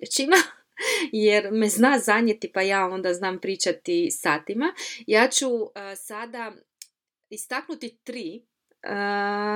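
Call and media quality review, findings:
Zipper noise, 5.27 to 5.78 s. Fine ticking rides on the speech during a level drop of roughly 15 dB. Probable component: gain stage without smoothing. The gain steps about 200 times a second, once per block, which fits a buffer of around 5 ms. Each step clicks.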